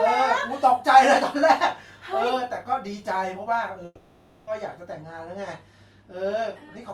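At 3.85 s the speech breaks off and the last sound smears into a fading buzz that fills about 620 ms, with a brief silence of about 30 ms before the speech resumes at 4.49 s, picking up further along with that stretch simply gone. This is a long network dropout: the audio likely stopped arriving for over half a second, so the receiver stretched out the final sound it had and could never recover the missing portion.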